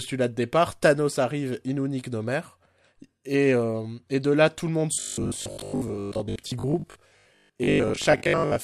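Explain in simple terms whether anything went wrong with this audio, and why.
Something did go wrong, starting at 4.94 s, right after "là tout le monde", and lasting to the end of the clip. From there the speech turns into a stiff, metallic buzz pitched at 50 Hz. This is robotic sound from repeated short buffers: new audio likely arrived too slowly, so the player kept replaying the last 20 ms, roughly half the time, skipping real speech. Unlike a plain dropout, there's no silence, just a steady buzz still loosely following the talking.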